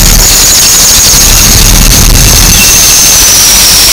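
From the start to the end, the audio is buried in very loud, harsh distortion, with quiet stretches as loud as everything else. The likely cause is signed and unsigned mixed up in what sounds like 16-bit samples, so every zero crossing leaps across the full range. Unlike clipping, nothing gets quieter when the signal does.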